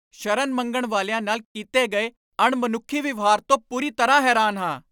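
No technical faults can be heard anywhere in the recording. The speech runs on without any audible interruption or defect.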